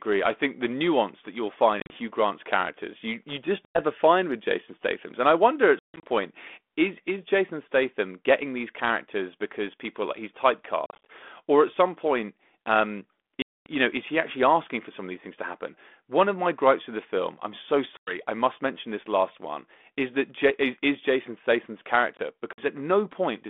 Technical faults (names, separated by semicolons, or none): packet loss on an ADPCM call; underrun with held sample